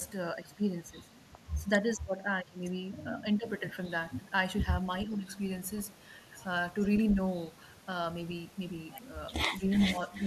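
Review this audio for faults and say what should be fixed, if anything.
Speech suppressed in double talk shows up five times: 0.34–1.07 s, 1.58–2.59 s, 3.03–3.45 s, 5.04–5.28 s and briefly at 9.59–9.63 s. The voice dips, worst in the second stretch at about 25 dB down, around 15 dB in the first, and only about 5 to 10 dB in the others. The likely cause is an echo canceller hearing both sides at once and pulling everything down because it couldn't tell the near talker from loudspeaker echo.

There's also an echo leak, where a copy of the voice comes back about 434 ms late. It's a faint scrap at 6.80–6.87 s, roughly 25 dB under the speech, and then much stronger from 9.70 s to the end, only about 5 dB below the voice. The far end is likely on a loudspeaker, and its canceller isn't fully removing what its mic picks up, so the residue gets sent back to you.

For a fix, tune the far-end echo canceller for better double-talk handling and fuller echo removal, or just get that side onto a headset.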